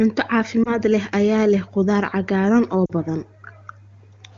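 A brief dip or warble at 0.64 to 0.78 s, then a fall to near silence at 2.85 to 2.91 s, are lost AMR speech frames. The AMR-WB decoder patched each gap by repeating the last good settings at falling gain, fitting one and then two missing 20 ms frames.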